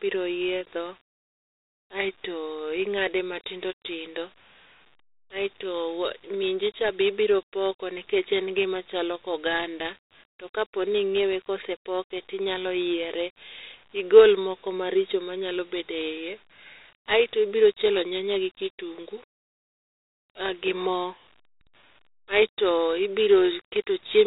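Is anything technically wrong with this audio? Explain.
Yes. Dialogic VOX ADPCM runs throughout this speech. The codec stores each sample as a 4-bit difference from a predicted value, adapting its step size as the signal changes. Here the coarse quantisation is plainly audible as a gritty hiss that rides along with the speech, and the sound fits a 32 kbps stream at 8,000 samples a second. Nothing remains above 3.8 kHz, so the audio has a narrow, telephone-like dullness.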